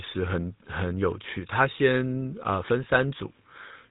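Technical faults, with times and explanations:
Throughout, GSM full-rate codec: the speech is rebuilt from a vocal-tract model driven by sparse, evenly spaced pulses, which fits the 13 kbps full-rate mode, giving a plainly audible buzzy, gravelly roughness. A spectrogram shows nothing above 4 kHz and grainy, smeared harmonics.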